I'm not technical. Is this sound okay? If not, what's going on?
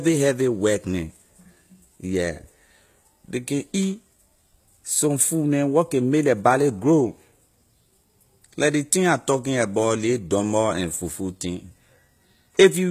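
No. Throughout the clip there is plainly audible damage, likely from HE-AAC compression. This format keeps only the lower tones of the speech and rebuilds the treble by copying lower sounds upward, so the top end, which stops at 14.9 kHz, isn't the original.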